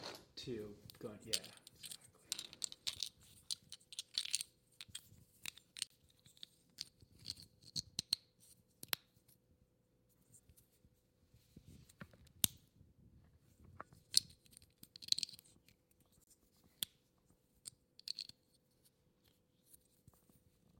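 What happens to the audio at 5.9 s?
A digital broadcast dropout mutes the sound from 5.87 to 5.91 s, a hole that fits one lost frame, seen as a flat waveform gap and a blank vertical stripe.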